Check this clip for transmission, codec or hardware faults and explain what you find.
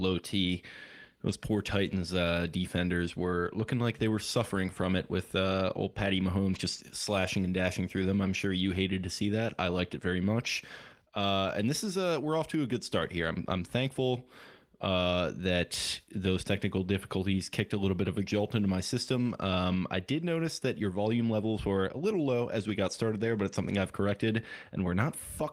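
Nothing in the speech recording points to a transmission, codec or hardware problem; the signal stays continuous and stable throughout.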